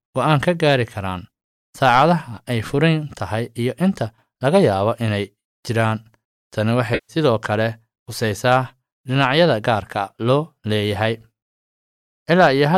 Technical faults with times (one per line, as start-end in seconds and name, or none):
6.94-7.16 AAC frame loss with concealment